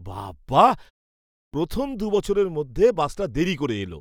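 Speech with a clipped start after a pause: following a 0.41 s gap, the output wakes late, swallowing about 0.31 s (1.23 to 1.54 s) before "প্রথম দু বছরের মধ্যে". On a waveform the signal jumps straight from flat silence into speech, and a spectrogram shows no onset energy.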